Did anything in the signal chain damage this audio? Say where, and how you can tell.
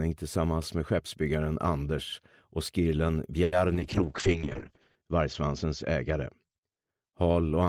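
Yes. From 3.43 to 3.54 s a sound is held about 90 ms too long, with nothing lost. That is a short stall from a late packet: the network jitter buffer ran empty and the receiver stretched the last sound.

Brief smears at 3.74–3.77 s and 3.79–3.82 s are short concealed packet loss. Network packets never arrived, and the decoder filled each gap by extending the preceding sound.

From 3.80 to 6.63 s the audio turns rough and muffled. This is a call bitrate drop at the codec stage: Opus fell from 32 to 7 kbps, narrowing bandwidth from 20 kHz to 8 kHz, and stayed at its lowest for about 1.1 s.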